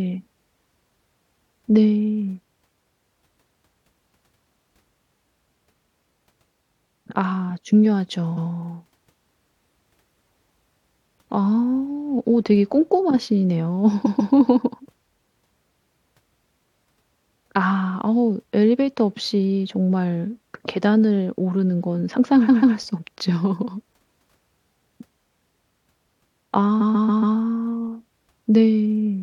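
At 8.36, 14.05, 22.48 and 26.80 s the speech stutters from repeated frames. A 139.3 ms block of compressed audio was sent again, which fits about six frames. It replays once, twice, twice, then four times, adding up to about 1254 ms.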